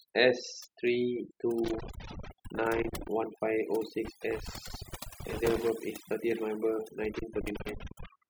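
A speech recording carries overdone noise removal from start to finish: a reduction stage set far too aggressively has pushed individual frequency bands down to nothing wherever they sat close to its noise estimate, taking the softer parts of the voice with them. The gaps fall to near silence dotted with twinkling specks. On a spectrogram this shows as a background scraped almost black, scattered with isolated bright dots, while the voice's own harmonics look patchy and full of holes. On top of that, loose connector crackle breaks out three times, from 1.64 to 3.08 s, 4.05 to 5.69 s and 7.04 to 8.06 s, where a worn or dirty contact keeps making and breaking so the signal is chopped into an irregular scratching burst. The waveform shows these stretches as ragged dropouts and sharp spikes, and the spectrogram shows them as dense vertical streaks running across the whole band.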